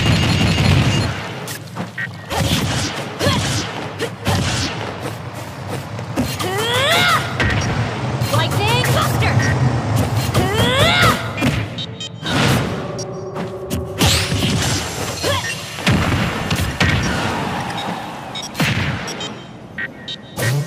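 Nothing here stands out as a technical problem; the audio runs along steadily without any glitch, dropout or disturbance that a listener would pick up on.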